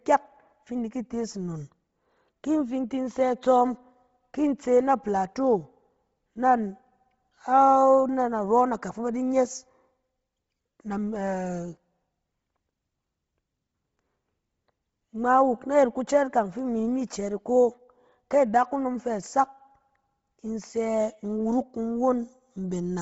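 From start to end, the speech has a breathy, grainy edge, and nothing is heard above 7.7 kHz. This is likely Bluetooth LC3 compression, heavily damaging, which fits a 24 kbps bitrate and 7.5 ms frames.

At 16.59 s, one sharp tick sounds. This is a bit error spike, where one flipped bit makes a single sample jump and return.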